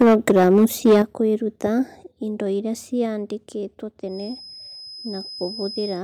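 Speech opens with microphone overload from 0.01 to 1.01 s, just before "kwĩruta indo iria". Peaks run about 8 dB past the converter's limit, and roughly a tenth of samples are flattened. The likely cause is an input set too hot. The microphone volume steps down at 0.02 s (about 2 dB), 1.02 s (about 7 dB) and 2.04 s (about 4 dB, before "indo iria"). Each step is likely call software cutting the device gain. From 4.04 s to the end, a thin 5.1 kHz feedback whistle sits about 10 dB under the speech. It is likely a speaker-to-microphone loop held at the edge of oscillation.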